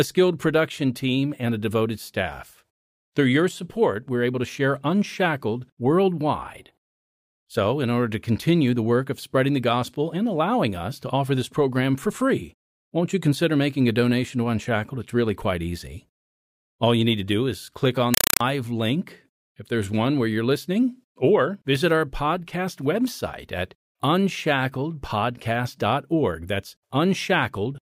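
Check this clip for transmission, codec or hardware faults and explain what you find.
One fault is present. From 18.14 to 18.41 s, between "do is click on" and "link if there's one", there is a compressed stream played as audio. Undecoded Dolby Digital data is treated as samples, producing loud chattering static of 4 ms bursts 31.25 times a second. That rigid rhythm with silent gaps distinguishes it from random noise corruption.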